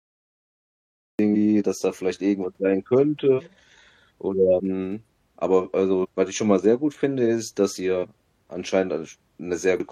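Digital silence runs until 1.19 s, a cut-off start: the speech bursts in mid-sound at "dass da vielleicht irgendwas" with no attack, shown as a flat line jumping abruptly into the waveform. Compressed frames skipped at 3.35, 4.55, 5.99 (before "was ich schon mal"), 7.99 (after "gut finde ist dass") and 9.76 s each drop about 200 to 300 ms, several 46.4 ms frames. On a spectrogram, each shows as an abrupt discontinuity.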